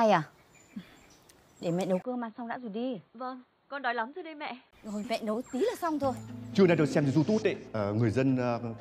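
At 2.02 s the sound goes dull and boxy after a brief 20 ms gap, drops by around 10 dB, loses everything above 4.4 kHz, and picks up a faint new noise floor until 4.73 s. That's likely an input switched to a poorer device mid-recording.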